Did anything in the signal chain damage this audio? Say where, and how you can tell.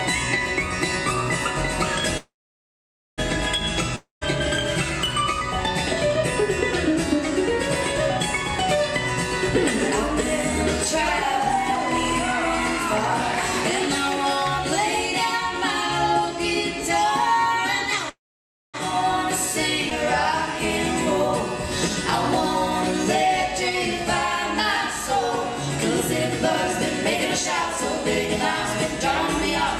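Yes, the damage happened in the network and jitter-buffer stage of a call.

Call audio freeze at 2.17 to 3.20 s and 18.09 to 18.76 s: the last sound is drawn out into a fading buzz, then holds near silence for about 0.89 s and 0.58 s. Playback resumes exactly where it stopped, so about 1.0 s and 0.64 s of extra delay are added with nothing lost. This likely comes from delayed packets draining the jitter buffer. On a spectrogram, smeared horizontal bands fade into a blank column. The waveform shows a decaying tail, then a flat line.

Long network dropout at 3.96 to 4.23 s: a fading concealment tail leads into about 150 ms of silence. When the sound returns, about 260 ms of it is gone and never replayed, so the material on either side does not connect. This is likely a run of packets that never arrived. On a spectrogram, the harmonics blur and thin out into an empty gap. The later sound then starts abruptly and continues from a different point.

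Skip ahead at 19.90 to 19.93 s: playback jumps forward with almost no gap, and about half a second of sound is cut out. The two sides are joined within roughly 10 ms. Packets were discarded while later audio was already queued, either in transit or when the jitter buffer overflowed. On the waveform this appears as a hard splice with a sudden change in envelope. On a spectrogram there is a vertical seam where the spectral content changes instantly.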